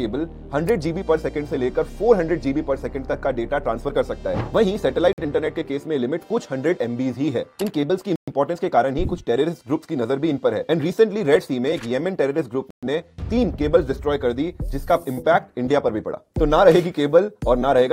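Three short dropouts interrupt the audio: at 5.13 s the sound goes silent for about 51 ms, at 8.16 s for 118 ms, and at 12.71 s for 121 ms, then resumes. These are likely Bluetooth stalls, with the headphone buffer running empty while delayed packets were resent. On a waveform each shows as a flat gap at zero; on a spectrogram, a clean vertical band of empty space across all frequencies.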